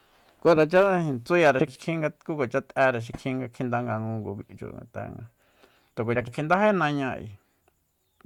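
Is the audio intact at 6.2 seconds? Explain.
No, from 6.15 to 6.30 s two neighbouring 60 ms blocks play swapped, frames out of order, giving a brief garbled flutter.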